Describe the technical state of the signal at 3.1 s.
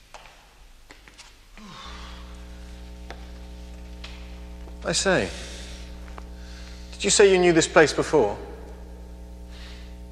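At 3.1 s a mains hum sits under the sound, running from 1.85 s to the end. Power-line coupling, likely through a ground loop, adds a steady 60 Hz tone about 20 dB below the signal. A spectrogram shows an unbroken horizontal line at 60 Hz, with fainter harmonics above it.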